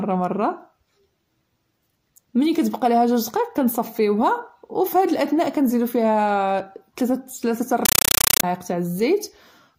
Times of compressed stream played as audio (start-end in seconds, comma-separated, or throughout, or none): 7.85-8.43